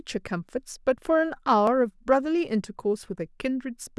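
A speech recording where the stream likely lost a tiny run of dropped samples, under a millisecond each time, at 0.74 s and 1.67 s. The waveform jumps straight to a later value, so each gap is heard as a single sharp click.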